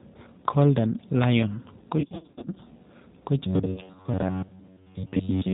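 A speech clip carried over the G.729 codec throughout, and the damage is plainly audible: everything above 4 kHz is gone, and the 8 kbit/s model rebuilds the voice from a filter plus a few pulses per frame, so it comes out rough and slightly synthetic. From 2.00 to 2.58 s there's VoIP packet loss concealed by the speech codec. About 340 ms of audio drops out in short gaps scattered over 560 ms, none longer than 50 ms. Each time, the decoder stretches its last pitch and filter into a fading buzz or coloured noise, and the voice stays weak for a while afterwards. A smaller burst follows from 3.72 to 3.89 s, with 50 ms lost over 100 ms and gaps of up to 20 ms. From 3.47 s to the end, the sound turns into a rigid, metallic robotic buzz pitched at 93.8 Hz. That is likely repeated short buffers of roughly 10.7 ms standing in for audio that arrived too late, with most of the stretch being repeats rather than new audio.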